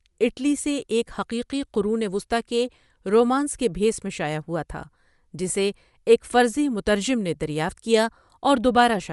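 Across the whole recording the speech has a plainly audible grainy, breathy edge in the upper band, where detail is replaced by a noise-like texture. This is likely Bluetooth LC3 compression, whose transform coder zeroes upper spectral bands and noise-fills them, consistent with 10 ms frames at roughly 48 kbps.

At 5.49 s there is a brief smeared, noisy blip lasting about 10 ms, consistent with one lost LE Audio frame. The decoder concealed the gap by repeating the previous spectrum with randomised signs, so that instant loses its tonal structure.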